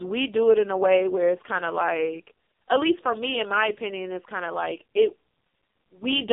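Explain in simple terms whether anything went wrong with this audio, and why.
The whole recording, from start to finish, has passed through the AMR narrowband mobile codec, the speech compression used on older mobile phone networks. It keeps only a narrow slice of sound, roughly 250 Hz to 3.5 kHz, so everything sounds thin and boxed-in. Unlike a simple telephone-style filter, which only narrows the sound, this codec rebuilds the voice from a rough model at a very low data rate, so the speech comes out heavily buzzy and synthetic.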